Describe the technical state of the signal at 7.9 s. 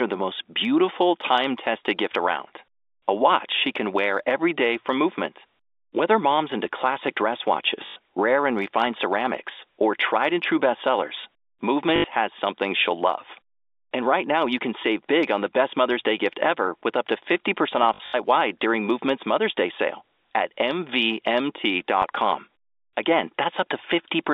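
A short robotic stutter with a 50 Hz buzz runs from 7.86 to 7.96 s, between "mom's into classic dress" and "rare and refined ceramics". This is packet loss with the last packet repeated: 100 ms went missing, which fits five 20 ms packets, and the receiver replayed the final good packet.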